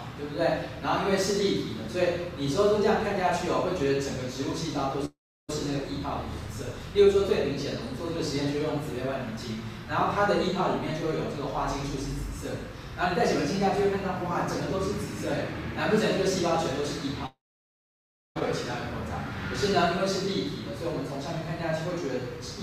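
At 5.05–5.50 s and 17.26–18.37 s, a brief fading buzz gives way to silence of 0.33 s, then 0.98 s: likely a long network dropout. Unlike a short glitch, audio resumes with the missing stretch gone.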